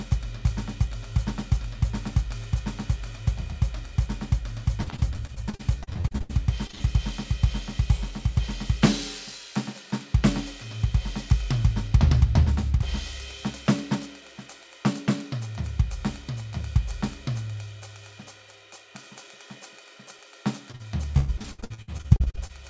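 From 3.01 s to 20.19 s the music carries a regular click roughly every 3.44 s, about seven in all. These are clock drift buffer slips, likely from two devices whose clocks differ by a few hundred parts per million, so a buffer periodically drops or repeats several dozen samples.

Between 4.84 s and 6.31 s the music turns choppy, with fragments missing. This is repeated packet loss, producing the robotic sound. Over a dozen gaps, the longest about 71 ms, are patched by extending the preceding sound, so more than a quarter of this stretch is filled-in audio.

At 6.67 s and again at 6.71 s there are two brief smears, each about 20 ms long. These are short concealed packet losses, where audio arrived too late and the receiver bridged the hole by continuing the last sound before blending back into the real signal.

From 6.75 s to 6.82 s the last sound is held and fades before the music resumes slightly further on. 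This is a burst of packet loss, with about 40 ms missing. The receiver kept extending the last sound until real audio returned.

From 20.72 s to 22.51 s the choppy, robotic texture returns, more heavily this time, with gaps up to about 106 ms and over a third of the span concealed. This is another stretch of repeated packet loss. Throughout the clip nothing is heard above 8 kHz, consistent with a wideband call codec.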